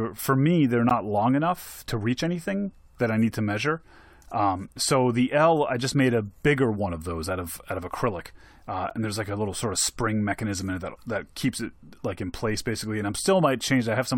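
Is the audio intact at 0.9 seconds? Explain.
No. At about 0.89 s the speech drops out for 14 ms. It falls between "for me they're" and "long enough to reach". This is a gap between stream segments. The speech arrives in 4-second pieces, and the timing of two of them fails to line up. The player fills that hole with silence. It sounds like a tiny hard-edged click or blink in the speech. Nothing is missing, because the speech simply resumes slightly late.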